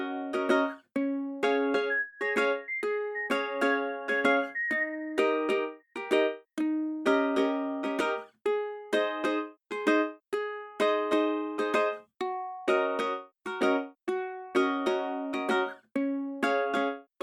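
No technical faults occur at any point in this clip, so there is nothing to describe in time order.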